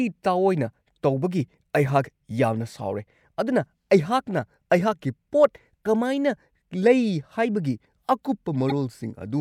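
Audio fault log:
5.82–5.86 s and 8.69–8.72 s, damaged data in a compressed stream: Two brief glitches break the speech, lasting about 40 ms and 28 ms. Corrupted bytes made the decoder misread those frames. It lost sync and hunted for the next valid frame header.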